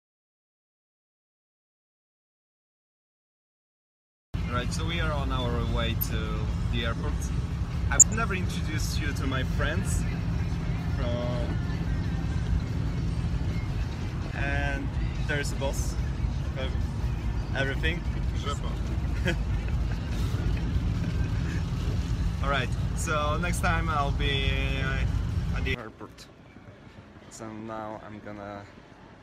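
The clip opens in an audio dropout to silence that runs until 4.34 s: plain silence, no room tone at all. The input was likely lost upstream while the recorder kept writing, so whatever came before the sound kicks in is simply gone.

Then come three short bursts of DAB burbling, at 5.87 to 6.13 s, 7.98 to 8.14 s and 14.24 to 14.33 s. Each is a brief patch of noise blips where residual bit errors at a low error rate, well under one percent, corrupted the MP2 data, putting short blips into individual sub-bands across 12, 7 and 6 frames respectively.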